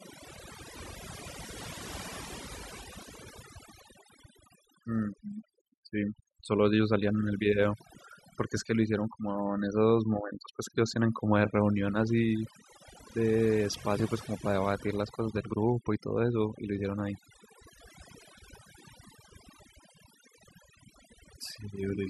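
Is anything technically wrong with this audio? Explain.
Yes. Throughout the speech there is overdone noise removal. A noise reduction stage was pushed too hard on a noisy recording. Every frequency band that sits close to its noise estimate gets pulled far down or switched off, and the softer parts of the voice are caught along with the noise. The background drops and breaks up into twinkling, chirpy specks.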